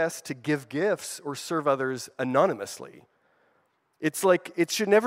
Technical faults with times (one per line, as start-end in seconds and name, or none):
none